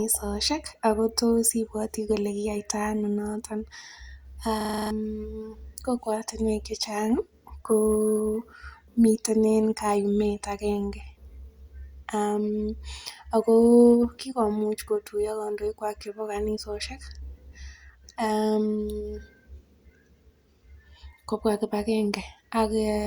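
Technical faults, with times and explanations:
4.61 to 4.91 s, system hang loop: the speech stops and one tiny slice of audio repeats exactly, seven times in a row. Each slice lasts 42.67 ms, so the repeats arrive at 23.4 Hz. That rate is slow enough to hear as a rapid stutter with a buzzing edge. The system stalled while the sound hardware kept replaying its last buffer, which fits a 2048-sample ring buffer. About a third of a second of real speech is lost.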